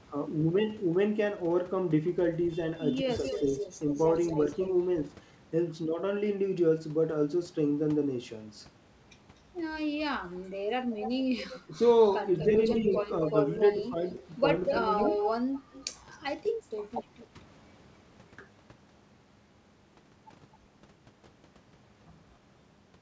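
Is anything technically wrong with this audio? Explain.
Yes. The speech has three echo leaks, two stretches of speech suppressed in double talk, and one brief dip where the background is gated by the echo canceller.

Echo leak, from 2.78 to 4.69 s, 9.98 to 16.18 s, and 17.19 to 17.26 s: a delayed copy of the speech arrives about 244 to 249 ms late. The likely cause is an echo canceller on a loudspeaker end that failed to remove its own playback. In the first two stretches the copy sits roughly 10 dB below the speech and in the last roughly 25 dB below. On a spectrogram it shows as faint repeated harmonic patterns shifted right by a quarter second.

Speech suppressed in double talk, from 3.02 to 3.54 s and 11.66 to 14.84 s: the talker's level dips while the far side also speaks. It drops by up to about 15 dB in the first stretch and about 10 dB in the second, over roughly 150 ms and 700 ms in total. 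The likely cause is a canceller that could not separate the talker from the echo. The waveform shows notched, pinched sections.

Background gated by the echo canceller, from 17.03 to 17.14 s: the room sound drops by about 8 dB for roughly 100 ms, then returns. The waveform shows a brief hole in the noise floor.

The G.722 call path limits everything to below 8 kHz.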